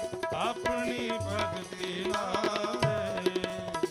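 The audio stutters at regular joins: 0.36–0.39, 0.89–0.91, 1.41–1.43, 1.93–1.96, 2.46–2.48, 2.98–3.00 and 3.50–3.52 s. It's overlapping chunks. Each half-second block starts about 23 ms before the previous one ends, so that sliver plays twice.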